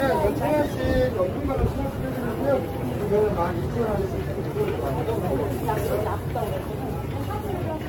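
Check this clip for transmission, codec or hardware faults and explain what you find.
One codec fault runs through the whole clip: generation loss. The sound is swirly, smeared and hollow, attacks are blurred, and nothing remains above 17 kHz. This likely comes from about ten rounds of lossy AAC-LC re-encoding at 96 kbit/s, each pass requantising on a shifted frame grid so noise and spectral gaps accumulate.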